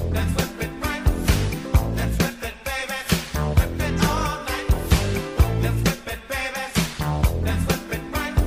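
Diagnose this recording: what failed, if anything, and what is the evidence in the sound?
Nothing in the recording points to a failure at any stage, from the wiring and converter through to storage and playback, so there's no fault to diagnose here.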